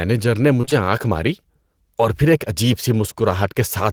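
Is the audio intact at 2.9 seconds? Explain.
Yes, the audio is intact at 2.9 seconds, with no audible fault at that moment.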